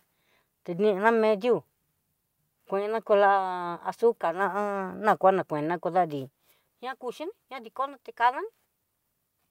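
No technical faults can be heard in this recording.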